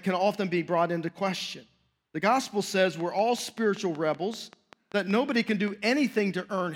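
From 3.00 s to 5.69 s a steady ticking rides over the speech, about 5.2 clicks per second at an even pace, some fifteen near-identical pops peaking about 5 dB above the speech level. This train of clicks likely comes from interference from nearby equipment injecting repeated pulses.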